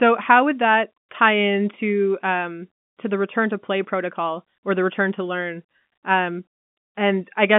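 No faults detected in the speech; the path runs through ordinary G.711 mu-law telephone coding at 64 kbps, giving the expected 200 Hz to 3.5 kHz line band with nothing above 3.7 kHz.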